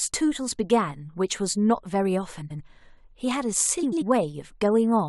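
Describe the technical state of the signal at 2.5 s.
At 2.5 s the signal sits inside a frames-out-of-order fault spanning 2.41 to 2.61 s. Two adjacent blocks of about 93 ms each, which fits runs of four frames, play in swapped order, giving a garbled flutter. No time is lost.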